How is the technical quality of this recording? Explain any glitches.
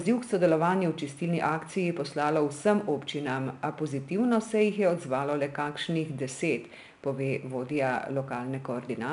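The recording has one fault running through it: 4-bit ADPCM compression, plainly audible for the whole clip. Each sample is coded as a coarse 4-bit step from a predicted value, so a gritty hiss rides along with every loud syllable and sharp attacks get crunchy. Nothing comes through above about 10.6 kHz, which dulls the top end and fits a stream of around 89 kbps.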